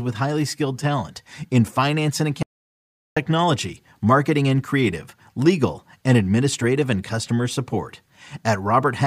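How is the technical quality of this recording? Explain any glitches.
The recording has one clear glitch, an audio dropout to silence. Right after "talent in finance and", at 2.43 s, the speech cuts to silence until 3.16 s, about 0.74 s, with no room tone underneath. The input was likely lost briefly while recording continued writing silence, so that stretch of speech is simply missing.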